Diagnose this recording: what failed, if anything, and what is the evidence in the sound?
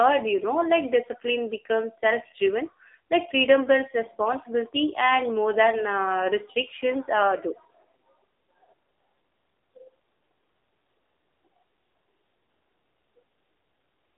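Thin, boxy and buzzy from start to finish, with a synthetic edge on every syllable and no content above about 3.8 kHz; the usable band sits roughly between 300 Hz and 3.7 kHz. This is the AMR narrowband mobile codec at the codec stage. The voice is rebuilt from a vocal-tract model and sparse excitation pulses at 8 kHz sampling, and the plainly audible coarseness points to a low mode, which fits about 7.4 kbps.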